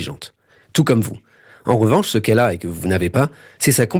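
No faults to report; the speech carries only the light coloration expected of Opus voice compression running hybrid at 20 kbps, fullband.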